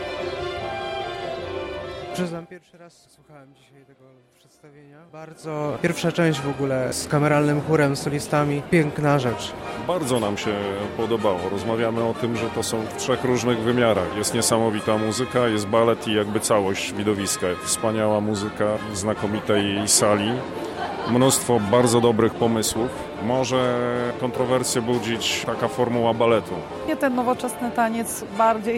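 From 2.22 to 2.61 s, zipper noise: the level falls by roughly 25 dB in 2 dB steps, about forty a second, with no smoothing. Each step clicks, giving a fast ticking. From 5.07 to 5.79 s, a similar rise steps back up, ticking at about twenty a second.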